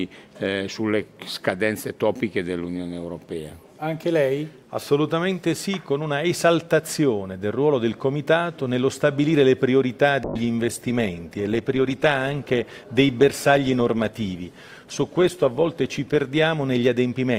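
From 10.25 s to the end, the sound turns rough and muffled, with a watery smear. This is a call bitrate drop: the bandwidth estimate fell and the encoder coded far more coarsely, consistent with a cut from about 128 to 18 kbps, held at its lowest for 5.45 s.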